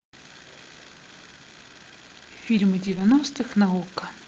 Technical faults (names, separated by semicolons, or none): lost packet rebuilt from error correction